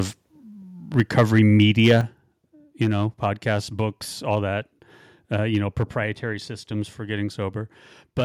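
From 0.98 to 1.99 s, microphone overload gives the loudest syllables a harsh, crackling edge. Peaks push about 4 dB past the converter's limit, flattening roughly 2% of samples, likely from excessive input gain. The waveform shows flat-topped peaks, and the spectrogram shows broadband smearing.

At 1.0 s and 2.01 s, the microphone volume steps down by about 2 dB and then about 7 dB, dropping voice and background together, likely because the call software cut the input level. The waveform envelope shows abrupt steps.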